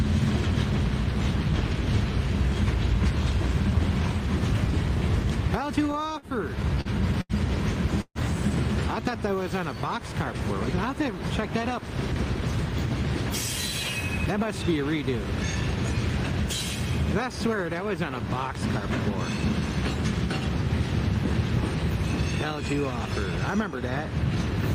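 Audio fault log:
5.87–7.32 s, repeated stalls (stutter): the sound halts eight times, the longest hold about 83 ms, with roughly 220 ms bridged by stretching the preceding sound. Nothing is lost, so it drags and hiccups rather than skipping, unlike dropouts that cut material away.
8.01–8.18 s, call audio freeze: one 137 ms hold where the last sound carries on briefly, then falls to about 60 ms of silence before resuming where it stopped, most likely from packets held up in transit. A single longer pause, not a cluster of stutters.
9.17–9.75 s, jitter buffer slow-down: about 51 ms is added by repeating tiny slices of the waveform, so this stretch plays at 93% speed while the pitch stays put. That unchanged pitch separates it from a tape-style slowdown, which would drop lower.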